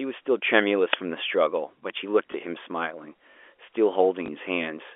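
Uninitialised buffer at 0.93 s: for about 5 ms the playback read a block of memory that had never been filled with audio, and those stale values went out as samples. The result is a brief, loud crack cutting into the speech. Its length fits a 256-sample block at 48 kHz, which points to a single buffer slot played before anything was written into it.

Packet loss with last packet repeated at 2.32 s and again at 4.26 s: each time, 20 ms of audio failed to arrive, and the receiver filled the gap by replaying the packet it had just played. The repeated segment seldom lines up with the pitch cycle of the speech, and each single repeat is heard as a small blip. Since each gap lasts only one packet, there is no sustained buzz. Throughout the clip, the narrow 300 Hz to 3.4 kHz line band of G.711 A-law telephone coding can be heard.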